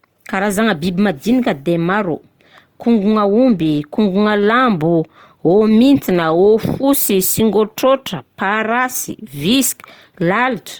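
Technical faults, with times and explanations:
Throughout, Opus compression: the speech likely passed through Opus in its CELT mode at a rate that fits about 24 kbps. Starved bands get refilled with folded or noise energy, making it plainly grainy and rough, though bandwidth reaches 20.2 kHz.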